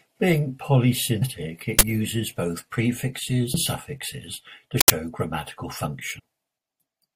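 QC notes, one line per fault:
1.21, 3.53 and 6.18–6.20 s, compressed frames skipped: the speech jumps ahead by about 200, 300 and 150 ms. At 3.53 s the jump falls between "both prefixes" and "suffixes to". Runs of 23.2 ms frames were left out, so the audio skips ahead by their length.
1.79–1.81 and 4.81–4.90 s, uninitialised buffer: a loud crack lands just before "both prefixes" and a burst of digital noise just after "suffixes to". The burst lengths fit 1024- and 4096-sample blocks played from unwritten memory.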